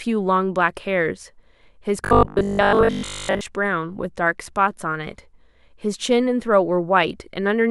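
Robotic sound from repeated short buffers runs from 2.05 to 3.41 s. The speech collapses into a metallic buzz at 50 Hz, which fits a looped 20 ms slice. The likely cause is audio arriving too slowly, with most of that stretch replaced by repeats.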